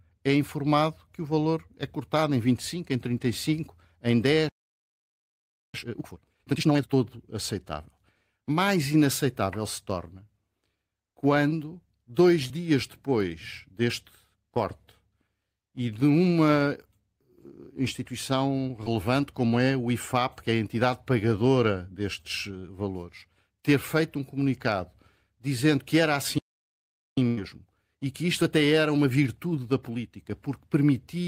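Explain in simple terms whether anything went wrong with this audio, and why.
Playback stall, at 4.49 to 5.74 s and again at 26.38 to 27.17 s: the speech stops dead mid-flow, for about 1.25 s the first time and 0.79 s the second. The likely cause is that the player ran out of incoming data, or was briefly held up, and had nothing to play until it recovered.

Time-compressed catch-up, at 5.74 to 6.98 s and 27.17 to 30.17 s: after each stall the player makes up lost time by trimming tiny slices and blending the joins. The speech sounds rushed, at double speed the first time and about 1.1 times speed the second, with normal pitch.

Short concealed packet loss, at 18.84 to 18.88 s: about 20 ms of speech never arrived in time. The receiver stretched the preceding sound to cover the hole, leaving a brief smear or wobble where the original speech was lost.

Burst of packet loss, at 27.28 to 27.39 s: roughly 100 ms of speech went missing in one go. 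The receiver extended the last sound and let it fade, producing a short held buzz or hiss. The speech then picks up further on, with that stretch gone.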